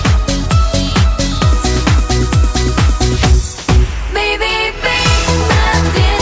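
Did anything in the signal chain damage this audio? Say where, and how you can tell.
No, nothing in the chain damaged this audio.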